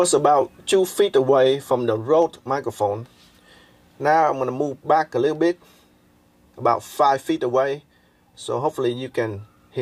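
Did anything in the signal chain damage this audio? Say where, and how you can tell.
No, nothing in the signal chain audibly damaged this.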